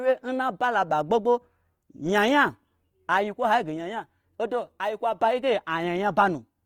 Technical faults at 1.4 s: Opus compression

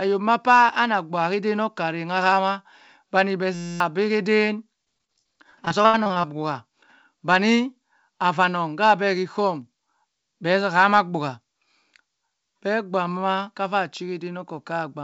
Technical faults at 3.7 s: system hang loop

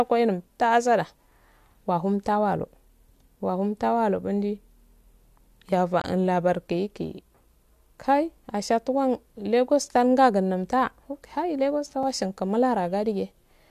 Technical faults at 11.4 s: none

